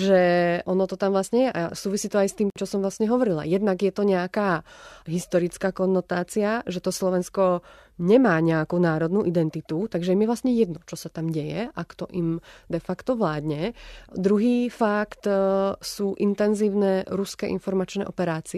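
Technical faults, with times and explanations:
2.50 to 2.56 s, gap at a join of encoded pieces: a gap of about 58 ms opens in the speech, which then resumes with "čo som vlastne", picking up exactly where it left off. Two separately encoded segments were spliced without removing the encoder's start-up delay and final-frame padding, so that silence sits between them. Unlike a dropout or an edit cut, nothing is missing. The flow is merely held apart, with edges smeared by the codec.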